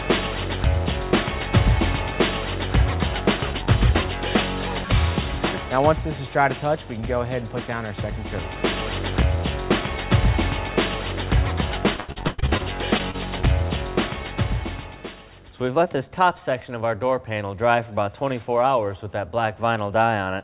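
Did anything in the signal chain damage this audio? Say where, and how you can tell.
Yes. At the network stage, repeated packet loss (robotic sound) runs from 11.96 to 12.62 s: eight gaps, the longest 100 ms, with nearly half that span concealed. The decoder keeps extending the last sound into each hole, giving a choppy stretch with pieces missing.

Shortly after, two short concealed packet losses, each about 20 ms of missing audio, occur at 12.98 s and 13.11 s, within the band-limited G.711 call audio. The jitter buffer patched each gap from the preceding sound, so each is a brief smear or wobble.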